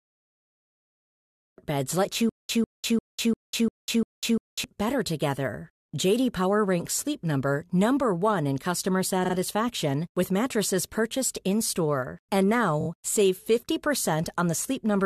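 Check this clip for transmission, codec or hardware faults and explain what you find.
Three kinds of fault are present: a cut-off start, a stutter with silent gaps, and two repeated-frame stutters.

From 0.0 to 1.58 s there is dead digital silence, then the speech jumps in mid-sound with no attack. This is a cut-off start, where capture began late.

From 2.29 to 4.64 s, a burst of about 149 ms repeats six times, each followed by about 199 ms of silence, a steady 347 ms cycle. It is a stutter with silent gaps, likely from a stalled stream replaying its last fragment on each retry.

At 9.24 s a 46.4 ms slice plays twice more, adding about 93 ms. At 12.80 s a 23.2 ms slice plays three extra times, adding about 70 ms. Both are repeated frames: compressed blocks resent and decoded again, heard as brief stutters.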